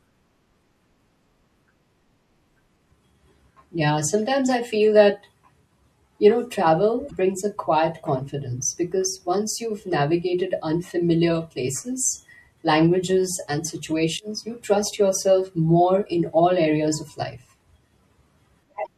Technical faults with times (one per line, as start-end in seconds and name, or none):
0.00-18.97 MP3 compression
7.07-7.11 damaged data in a compressed stream
18.82-18.87 damaged data in a compressed stream